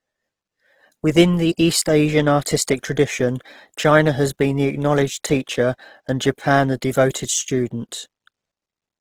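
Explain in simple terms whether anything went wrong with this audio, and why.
Something did go wrong, and it lasts for the whole clip. The speech sounds rough, grainy and noisy from start to finish. This is likely Opus compression squeezed too hard. When data runs short, it fills in detail with noise-like texture instead of the real sound.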